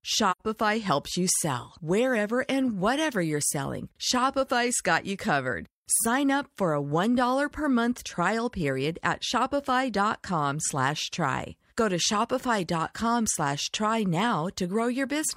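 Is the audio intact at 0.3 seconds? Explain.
No, there's a gap right there. From about 0.31 to 0.41 s there's AAC frame loss with muting, just before "helps you sell". Roughly 85 ms of the speech goes missing, which fits two lost AAC frames. The decoder fills them with a zeroed spectrum, so the sound drops to silence, but the overlapping transform windows ease it out and back in over about a frame. What you hear is a soft-edged hole rather than a hard cut.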